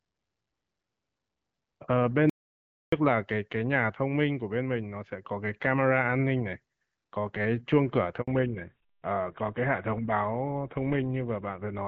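At 2.30 s the speech cuts out abruptly into an audio dropout to silence lasting 0.63 s, until 2.92 s. The gap is silent with no room tone, so the input was likely lost upstream while the recorder kept writing.

At 8.22 s a handover gap follows: the speech fades within a few tens of milliseconds and stays silent for 60 ms. This is the stretch where no frames arrived while the call switched networks, and that speech is lost.

From 8.28 s to the end, the call shows a fallback to narrowband. Before this point the wideband HD Voice coding carries clear, lightly coded speech. After it, nothing remains above 4 kHz and the speech turns duller and rougher, which fits a drop to GSM full-rate coding.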